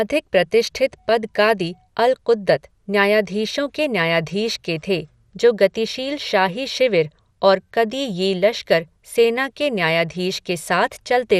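Throughout the speech there is a dull, gurgling, granular roughness with nothing above 15.1 kHz, most likely from MP2 compression at a rate that fits around 80 kbps. Too few bits per sub-band switch off the upper bands and leave the remaining ones coarsely quantised.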